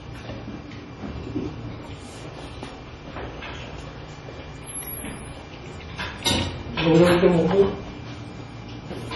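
An everyday sound recording with heavy MP3 compression damage throughout: a watery, swirling texture, smeared attacks and nothing above 11.5 kHz. A spectrogram shows a flat ceiling there and flickering holes below, the likely result of an encoder starved of bits, fitting roughly 32 kbps.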